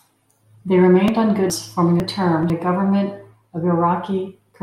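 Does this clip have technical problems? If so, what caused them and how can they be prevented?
Yes: chunks out of order from 1.5 to 2.5 s, between "remained on" and "a government of". One 500 ms chunk arrived late and plays after the chunk that should follow it, so nothing is missing but the speech sounds jumbled, with three hard joins. Reordering audio by sequence number or timestamp before playback or writing prevents this.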